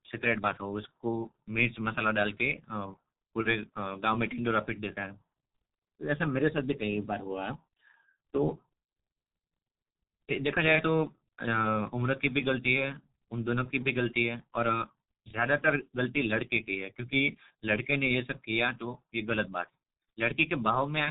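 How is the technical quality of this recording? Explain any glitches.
Technical quality is poor, with heavy G.723.1 codec damage across the whole recording. The speech is carried by a low-rate telephony codec that works in 30 ms frames and fits a bitrate around 6 kbit/s. It removes everything above 3.8 kHz and refreshes its model of the voice only once per frame, so the speech sounds muffled and hoarse, and consonants smear together. On a spectrogram the energy stops at a hard ceiling near 3.8 kHz, with blocky, frame-sized patches instead of fine harmonic detail.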